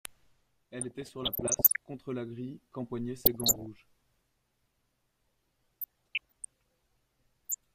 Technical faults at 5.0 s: none

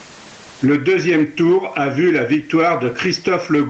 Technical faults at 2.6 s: gain pumping

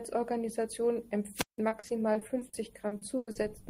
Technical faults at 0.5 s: none

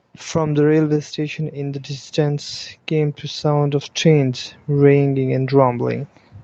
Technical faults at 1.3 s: automatic gain rising

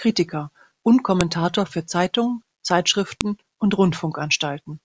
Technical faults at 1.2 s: file header played as audio

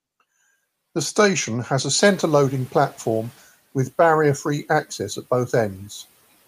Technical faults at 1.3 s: none

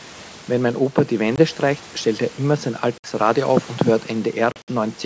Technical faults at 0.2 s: none

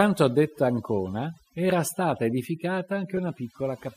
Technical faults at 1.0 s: overdone noise removal

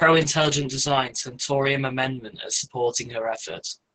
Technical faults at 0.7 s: Opus voice compression

